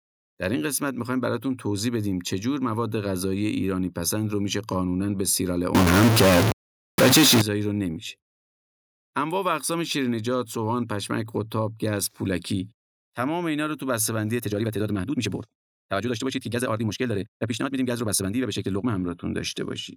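A single data bit, likely held fixed by a broken line or converter, corrupts this speech recording from 5.75 to 7.41 s. With one bit stuck at 0 or 1, roughly half of the sample values land off by that bit's weight, in a pattern that follows the waveform itself. The result is distortion laid over the signal for that stretch, and the quieter moments turn noisy because the stuck bit shifts with the sign of small values.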